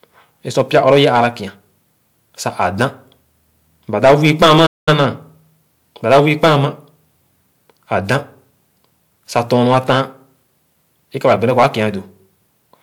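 A speech recording with two kinds of fault. Hard clipping occurs in five bursts: 0.58 to 1.26 s, 4.04 to 5.06 s, 6.10 to 6.65 s, 9.36 to 10.01 s and 11.25 to 11.84 s. In each, the level runs past what a stage can pass, so the peaks are cut flat. The flattened tops add harsh high harmonics. The worst burst, near 4 s, is driven about 13 dB over and sounds like a gritty fuzz. The others, about 6 to 10 dB over, crackle on the loudest syllables. Inside that worst burst there is also a playback stall. The sound stops dead at 4.66 s and returns at 4.89 s, a silent gap of about 205 ms. Output then resumes after the break. The likely cause is a player that ran short of data or had its thread blocked, leaving nothing to play until it caught up.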